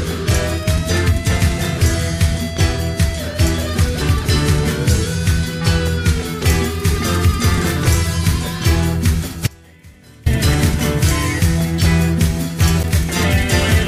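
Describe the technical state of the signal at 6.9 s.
At 6.9 s the signal is intact, with no dropout, distortion, glitch or other technical fault audible at that moment.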